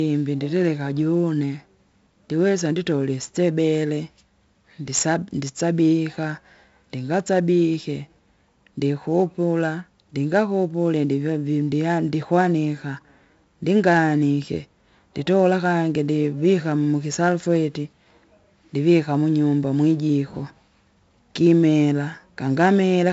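Speech runs through 4-bit ADPCM compression for its whole length, with heavy damage. A gritty hiss rises and falls with each loud syllable, and sharp onsets distort where the step size lags. Nothing is heard above 7.7 kHz, which fits a 16 kHz sample rate at 64 kbps. Unlike perceptual codec artefacts, there is no swirling or warbling.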